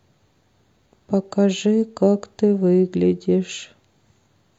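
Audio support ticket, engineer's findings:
No fault found on the speech recording; nothing in the signal path needs action and the ticket can close.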